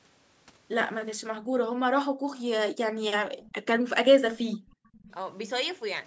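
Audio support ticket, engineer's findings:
Room tone drops out abruptly at 1.32–1.53 s, 1.72–1.83 s, 2.09–2.33 s and 4.56–4.85 s, falling by about 40 dB each time. Background gated by the echo canceller: the microphone path is pulled down hard while far-end playback is active, then released.

Brief dip in the near-end talker at 3.25–3.30 s, level down by about 10 dB for around 50 ms. Likely speech suppressed in double talk: both ends active, so the canceller attenuates near-end along with the echo it is trying to remove.

Faint delayed repeat at 3.46–3.55 s and again at 4.66–5.12 s, about 30 dB under the main speech and trailing it by roughly 0.5 s (497 and 499 ms). Likely echo leak: the loudspeaker end's canceller is passing residual playback back. The 8 kHz upper band edge comes from normal call microphone processing.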